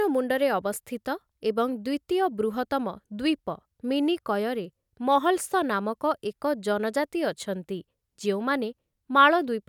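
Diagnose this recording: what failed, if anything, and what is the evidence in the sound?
Nothing failed: the speech recording holds steady throughout, with no audible defect at any stage of the chain.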